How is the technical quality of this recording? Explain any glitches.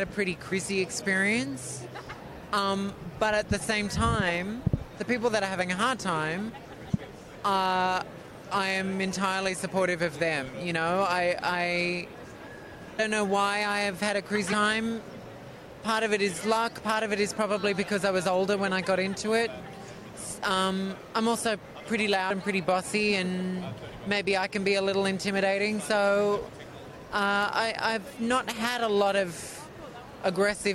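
The recording has one recurring fault: compressed frames skipped, at 0.51, 6.48, 12.98, 14.51 and 22.29 s. At each point the decoder never plays a few whole frames, either because they are missing or because they were rejected as damaged, so the audio jumps ahead. The skips are about 70 ms at the first two, about a fifth of a second at 12.98 s, and roughly 100 ms at the last two, which fits a frame length of about 23.2 ms. Overlapping frames smear each join into a short blip, not a sharp click.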